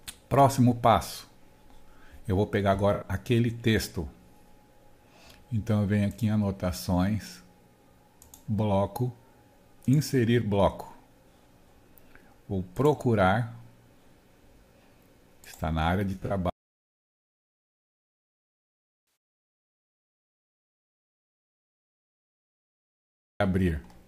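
At 2.93 s comes AAC frame loss with concealment. About 85 ms is rebuilt from the last good spectrum, giving a brief smeared, noisy patch. At 16.13 s it recurs, with gaps of about 107 ms scattered over 0.17 s and the longest run about 40 ms. At 16.50 s an audio dropout to silence begins. It lasts 6.9 s of silence with no room tone, likely from a lost input. Another concealed loss of about 107 ms falls at 19.05 s, inside that silence.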